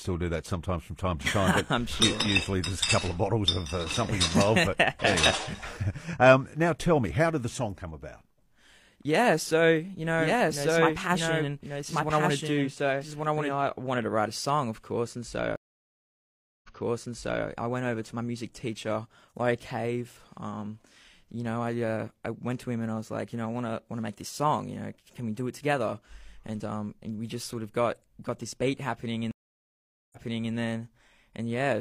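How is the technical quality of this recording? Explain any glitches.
The recording has clear glitches: a doubled passage and two dropouts where playback jumps back.

From 10.19 to 13.55 s, a doubled audio track appears, likely from a second capture path or an out-of-step edit adding another copy. A full-band duplicate about as loud as the original trails by about a second, with no room colour, starting and stopping abruptly.

Two stream reconnects follow. At 15.56 s the connection drops for 1.07 s, then a new decoder resumes 0.84 s earlier, so audio repeats with a muted or faded onset. At 29.31 s a 0.80 s silence ends with a 0.42 s rewind.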